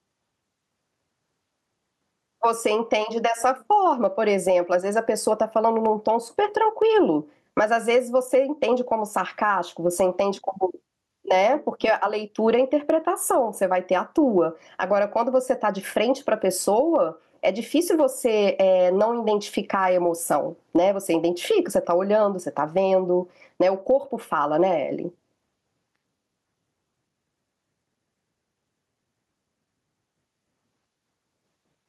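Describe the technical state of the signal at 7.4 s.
At 7.4 s the speech shows gain pumping, present throughout the clip, with loud and soft levels squashed together. The likely cause is excessive input gain tamed by a fast limiter, swinging roughly 15 dB.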